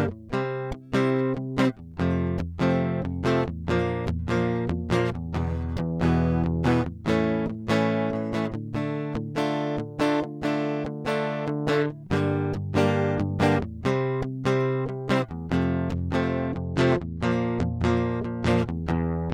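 Bluetooth SBC bit pool drop, from 16.2 s to 18.5 s: the Bluetooth link in this music clip appears to have become congested, and the sender reduced the SBC bit pool to keep the stream going. The sound fits a fall from a bit pool of 31 to 15, around 105 kbps. With so few bits, the highest sub-bands are starved and the remaining bands are quantised coarsely. The treble goes dull and a gritty noise comes up until the quality returns at 18.5 s.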